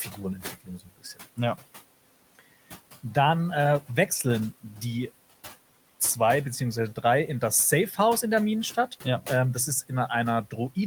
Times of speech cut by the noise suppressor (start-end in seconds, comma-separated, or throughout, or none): 0.44-1.39, 7.88-7.98